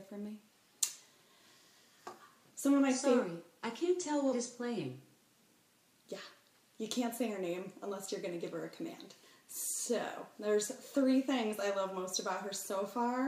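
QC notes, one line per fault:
No faults heard at any point in the audio.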